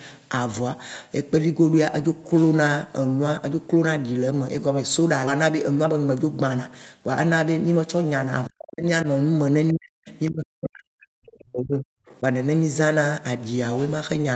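At 5.27 s the speech skips ahead: roughly a second of audio is missing, and playback jumps straight from one point to a later one with no fill and no silence between them. This happens when a jitter buffer discards a backlog to catch up with audio that is already waiting. On a waveform, the two sides meet at a single abrupt seam. On a spectrogram, the harmonic pattern changes discontinuously in one column.

Right after that, from 5.39 to 7.09 s, a jitter buffer speed-up runs the speech at about 113% of normal rate while keeping the pitch unchanged, trimming away roughly a fifth of a second in total. The receiver removes short pitch-period-length pieces again and again to shrink the excess delay. The speech sounds hurried and clipped. On a spectrogram, syllables look compressed in time, while harmonic spacing stays the same.

Between 8.48 and 8.87 s, 9.72 and 10.10 s, 10.30 and 11.10 s, and 11.39 and 11.89 s, the speech is sharply turned down, by around 40 dB at its deepest. 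It drops out or thins in pieces. This is speech suppressed in double talk, likely from an echo canceller that could not tell the near talker from loudspeaker echo while both sides spoke. The waveform shows deep notches in the envelope, and the spectrogram shows bands fading toward blank, with upper frequencies within the call's 8 kHz band going first.

At 12.11 to 12.16 s, a brief scrap of the other side's voice leaking through appears, very faint, on the order of 35 dB below the speech. It likely comes from residual loudspeaker echo the canceller left in the microphone signal. It is heard as a short trace. On a spectrogram, it shows as a faint, short patch of separate harmonics; on the waveform it is barely visible.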